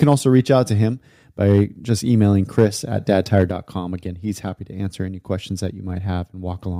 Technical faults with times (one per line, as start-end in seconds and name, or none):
0.02-0.39 microphone overload
0.04 microphone volume stepped down
1.46-1.61 microphone overload
2.58-2.65 microphone overload
3.37-3.43 microphone overload
3.51 microphone volume stepped down